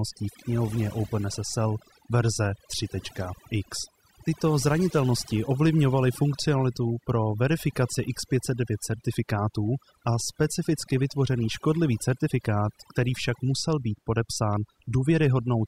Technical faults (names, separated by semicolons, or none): overdone noise removal